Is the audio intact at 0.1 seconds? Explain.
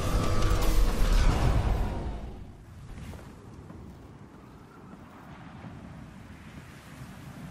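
Yes, the audio is intact at 0.1 seconds, with no technical fault audible at that moment.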